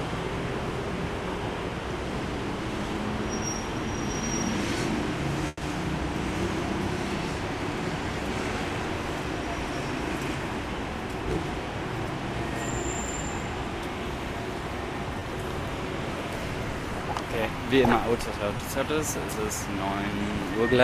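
At 5.47 to 5.63 s, a burst of packet loss: 140 ms went missing, concealed by a fading continuation that ends in about 10 ms of silence, seen as smeared, decaying spectrogram bands.

At 15.19 and 18.57 s, short concealed packet loss fills about 20 ms each, heard as brief smears, with blurred spectral texture.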